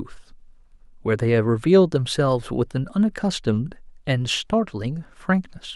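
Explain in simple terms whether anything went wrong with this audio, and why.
Nothing went wrong with this speech recording, since no technical fault can be heard anywhere in it. Nothing in the sound points to a problem with how it was captured or passed along.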